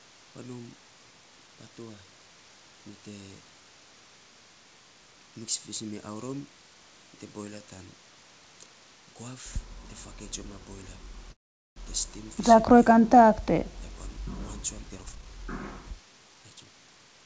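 Packets were likely held up in transit at 11.32 s, leaving the jitter buffer empty. The receiver carries the last sound on only briefly before the audio drops to silence for about 0.43 s, and then it resumes at 11.78 s exactly where it left off. This call audio freeze inserts a gap of about 0.44 s and pushes the playback delay later by the same amount, with nothing of the original audio lost.

From 14.9 s to 16.73 s, the jitter buffer was holding more audio than its target, so the receiver performed a jitter buffer speed-up. It trimmed short pitch-period-sized pieces again and again, removing about half a second in total. The speech plays at about 124% speed with its pitch unchanged and sounds noticeably hurried. On this G.722 call path, as throughout the clip, nothing is heard above 8 kHz.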